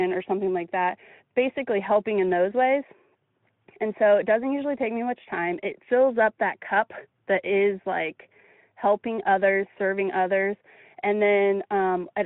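Nothing in this speech recording stood out as a technical fault on listening.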